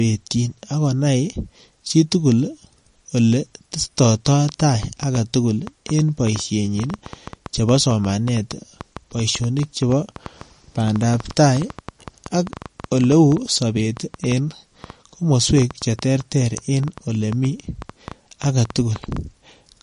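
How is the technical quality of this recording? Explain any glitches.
The quality is rough: two problems are obvious. Throughout, there's MP3 compression damage. Nothing comes through above 10.5 kHz, and the dropped weak detail makes the speech sound watery and swirly, with chirpy sibilants. That's plainly audible and likely a low bitrate, something around 45 kbps.

From 4.05 s to 19.18 s there's a train of clicks, roughly a hundred similar pops at about 6.2 per second, spaced unevenly and peaking a few dB above the speech. They tick over pauses too, likely from interference or a faulty connection.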